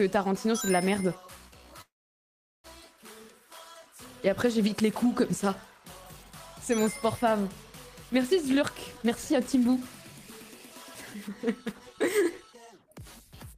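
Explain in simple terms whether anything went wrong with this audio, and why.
Yes, two things went wrong. From 1.81 to 2.67 s the sound stops: a short fading tail, then about 0.76 s of silence before it picks up exactly where it left off. That is a call audio freeze, likely caused by packets held up in transit so the receiver's jitter buffer ran dry. Nothing is lost. The pause is inserted, and everything after it now arrives about 0.83 s later.

Later the receiver works off that extra delay with a jitter buffer speed-up. From 8.58 to 9.82 s it plays at 120% speed by snipping out many tiny slices of sound, roughly a third of a second in total, so this stretch sounds rushed but keeps its normal pitch. From 11.18 to 13.58 s it does the same more gently, at 106%, trimming roughly 0.15 s. That second stretch is only slightly hurried.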